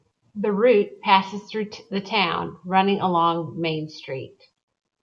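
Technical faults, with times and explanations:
No technical faults can be heard anywhere in this speech recording. There is nothing here that calls for a time or an explanation.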